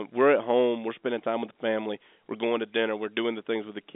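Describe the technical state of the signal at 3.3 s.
At 3.3 s the signal is intact, with nothing wrong at that moment beyond the narrow G.711 telephone coding band that stops short of about 3.8 kHz.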